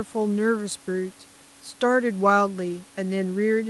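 No technical faults can be heard in the speech: it passes normally through a WebRTC call path with Opus coding at 40 kbps and audio bandwidth ending near 12 kHz, with the room's background noise sitting about 30 dB below the voice.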